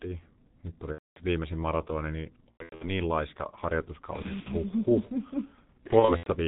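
Throughout, the G.723.1 codec at about 6.3 kbit/s heavily dulls the speech: nothing above 4 kHz, a hoarse texture and smeared consonants, steady rather than intermittent. VoIP packet loss concealed by the speech codec strikes at 0.92–1.20 s, just before "viimeisin maratoni niin", then at 2.51–2.88 s right after it, 4.22–4.51 s and 5.87–6.31 s. In each gap the decoder stretches the last sound into a fading buzz or coloured noise, which goes silent once three frames in a row are lost, and the speech stays weak briefly afterwards.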